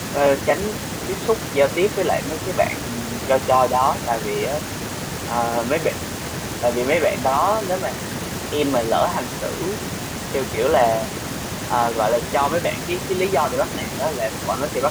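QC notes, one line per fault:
Nothing stood out on listening to this speech clip.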